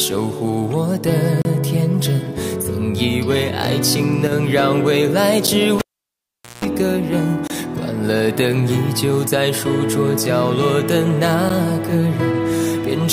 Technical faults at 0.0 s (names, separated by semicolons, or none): none